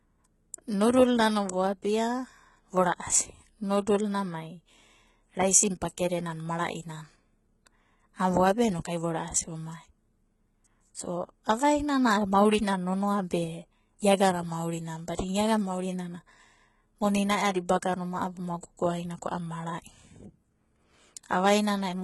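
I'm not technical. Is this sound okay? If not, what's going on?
No. The speech sounds heavily squashed from start to finish. The s sounds come out gritty, lispy and metallic, and nothing is left above 11.8 kHz. The likely cause is strong HE-AAC compression, which fakes the treble by copying lower sounds upward.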